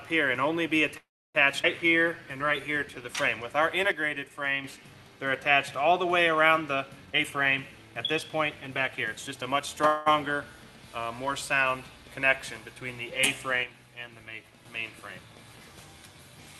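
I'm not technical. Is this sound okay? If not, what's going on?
No, there are a few hiccups of the kind you get on a shaky internet call.

The first is a call audio freeze at about 0.97 s. The sound stalls for roughly 0.37 s: a brief fading buzz, then about 0.31 s of near silence. That likely happens when the data carrying the audio gets held up along the way. The player has nothing new to play, so it stretches the last bit of sound and then goes quiet. When the data arrives, the sound carries on from exactly where it stopped, so nothing is lost. There's just an added pause. A shorter freeze hits at 9.87 s and lasts about 0.19 s. This time the filler fades but never drops fully to silence.

Right after, at about 1.63 s, there's a skip ahead. Roughly 0.15 s of sound is simply gone, and playback jumps forward with almost no gap. The two sides of that cut are stitched together nearly directly, so you hear a small abrupt lurch rather than a pause.

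From 1.88 to 3.03 s there's a jitter buffer slow-down. The system was running low on stored-up audio and wanted a cushion. It bought itself time by repeating tiny slices of sound over and over. That adds about 0.13 s, so this stretch plays at about 89% speed. The pitch doesn't change, but things sound a bit drawn out and can waver slightly.

The opposite happens from 7.05 to 9.67 s, a jitter buffer speed-up. Here the system had too much audio piled up, as happens when delayed data arrives in a bunch. It trimmed tiny slices out to catch up, removing about 0.4 s in total. That part runs at about 114% speed, again at the same pitch, so it comes across as a little rushed.

Finally, one channel drops out twice, from 3.91 to 4.64 s and from 13.63 to 14.65 s. The clip was likely stereo, with a left and a right side, and one side briefly went missing. Anything shared by both sides suddenly gets noticeably quieter, and anything only on the lost side vanishes until it comes back.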